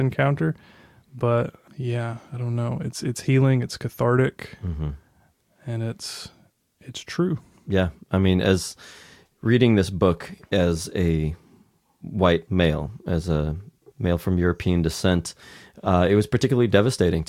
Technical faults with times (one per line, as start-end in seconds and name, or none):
none